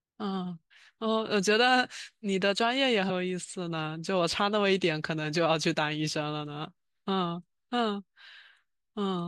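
At 0.70 s and again from 3.09 to 3.11 s the speech jumps ahead as compressed frames are skipped, losing roughly 50 ms and then about 150 ms, consistent with a couple of frames and then several. On a spectrogram it shows as a brief vertical smudge where harmonics break off. The waveform shows no gap, only a discontinuous envelope.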